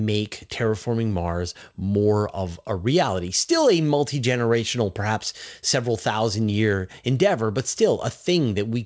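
The audio has passed through a call path whose codec leaves nothing above 8 kHz, consistent with wideband G.722 at 64 kbps, and nothing in it departs from what that path normally produces.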